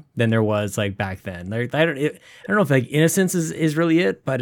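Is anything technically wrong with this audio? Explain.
No, nothing is technically wrong with this audio.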